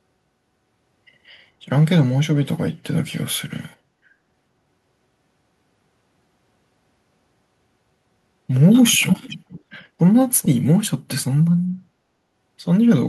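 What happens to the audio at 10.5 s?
Echo leak, likely from the far end's echo canceller letting part of its loudspeaker pickup slip back into the call. From 10.42 to 10.48 s a faint, short scrap of the speech returns about 0.43 s late, sitting roughly 20 dB below the live talker.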